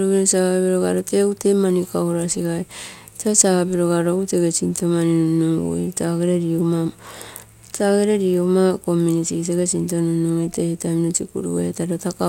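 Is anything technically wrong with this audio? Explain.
No, nothing is technically wrong.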